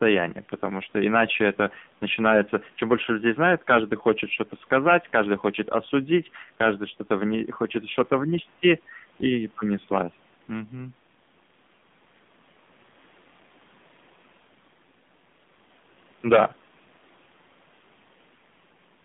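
Throughout, the speech sounds thin, buzzy and synthetic, with nothing above 3.7 kHz. This is the AMR narrowband mobile codec at a low rate, which fits its 7.4 kbps mode.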